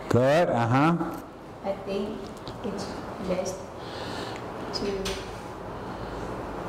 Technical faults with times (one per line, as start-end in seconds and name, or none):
none